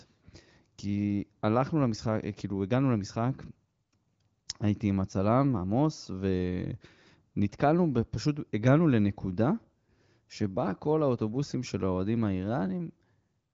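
Nothing's wrong with this speech clip; it's a straightforward AMR wideband (HD Voice) call at 18.25 kbit/s, which fits the sound running out at about 7.6 kHz.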